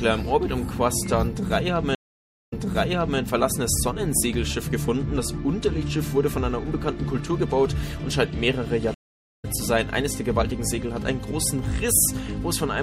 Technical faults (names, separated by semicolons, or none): MP3 compression; stream reconnect